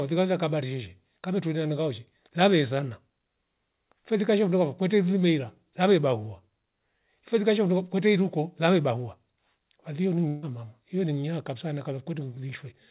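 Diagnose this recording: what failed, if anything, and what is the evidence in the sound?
A burst of packet loss hits the network stage from 10.28 to 10.45 s. About 150 ms of speech never arrives. Concealment holds the last sound and fades it, leaving no silence. Speech resumes at "huyo ling nya kabisa", and the skipped part is gone.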